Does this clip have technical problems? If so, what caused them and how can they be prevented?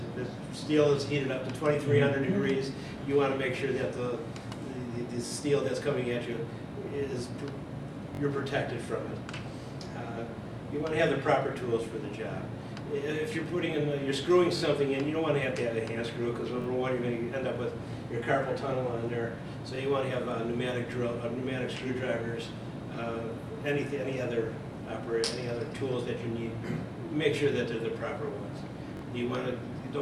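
Yes. Six short stutters, each a brief double or triple of the same slice of sound with hard joins, occur at 5.27, 8.15, 14.57, 16.62, 19.76 and 28.97 s. These are repeated buffers: new audio arrived late, so the device replayed its last block of about 21 ms, which fits a 1024-sample buffer. It played the block twice more each time, except at 19.76 s where it repeated once. A larger buffer or higher-priority audio thread would prevent it.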